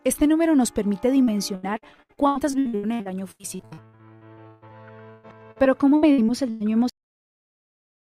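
From 1.23 to 4.72 s the audio breaks up with repeated packet loss, giving a robotic sound. About 25 holes open in quick succession, the longest around 148 ms, and each is patched by stretching the preceding sound, so roughly 39% of the stretch is concealment. The repeated, buzzy re-use of the last fragment sets it apart from plain dropouts, which would leave silence in the gaps.

A second, lighter bout runs from 5.10 to 6.62 s. Seven gaps, the longest about 135 ms, put roughly 28% of that stretch under concealment. The same robotic, choppy texture returns, with pieces of the sound missing and smeared over.

At 6.89 s the audio has a cut-off end. It stops mid-sound and falls straight to digital silence for the remaining second or so, because the final buffers were never written out. Unlike a fade or a noise gate closing, nothing decays or tapers. The sound simply ends in a hard edge.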